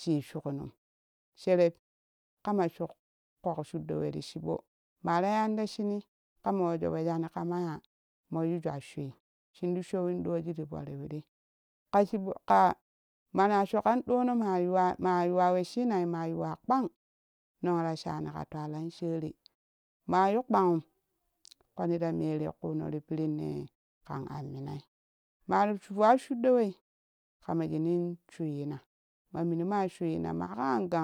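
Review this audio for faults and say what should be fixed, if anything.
Nothing needs to be fixed, since no faults turn up anywhere in this speech audio.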